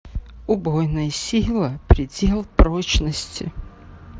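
At 2.40 s the speech shows concealed Bluetooth headset packet loss: one 7.5 ms packet never arrived, and the receiver patched the gap by repeating a matching stretch of recent waveform. It's barely audible, a faint smear in the mSBC wideband audio, and on a spectrogram it appears as a thin slice of copied harmonics.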